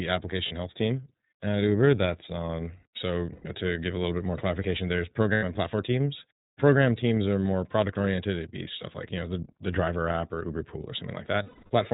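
The whole speech clip runs through the iLBC codec, and it's plainly audible: everything above 4 kHz is gone, and voices sound rough and slightly synthetic, which fits the 30 ms, 13.33 kbps mode. Lost iLBC frames turn up at 0.47 s, 3.32 s (right before "know to give a"), 5.34 s (between "bit more clarification there's" and "and platform teams") and 11.43 s. Each gap is filled with a held, slightly buzzy or breathy vowel as the decoder repeats the last pitch cycle. They last 30, 120, 90 and 270 ms, and the speech comes back straight after.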